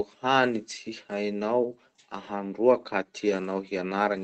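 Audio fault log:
1.41 s, lost packet rebuilt from error correction: a brief rough, noisier patch lasting 20 ms, with no gap or dropout. One packet's worth of audio went missing in transit, and the decoder filled it from the lower-bitrate backup copy carried in the next packet (Opus in-band forward error correction). The sound continues unbroken, but that frame is coarser than its neighbours, heard against the call codec's band-limited sound, which tops out around 8 kHz.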